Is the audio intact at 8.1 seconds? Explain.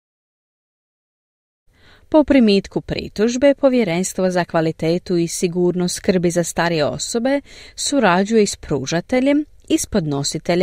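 Yes, the audio is intact at 8.1 seconds, with no fault at that moment.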